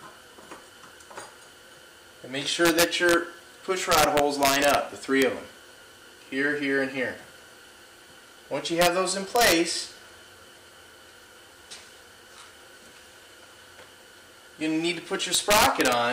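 Integer overflow cracks break out at 2.65 to 3.14 s, 3.92 to 4.75 s, a single tick at 5.22 s, then 8.82 to 8.87 s, 9.36 to 9.52 s, and 15.35 to 15.93 s. The loud passages get driven about 2 to 3 dB past full scale (the 5.22 s one only just tips over). Instead of being clamped, those peaks wrap straight round to the opposite sign. That gives you violent, splintering cracks, much harsher than plain clipping.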